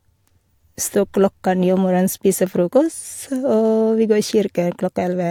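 Nothing technical goes wrong anywhere in this bit of speech, so there's no fault to point to at any moment.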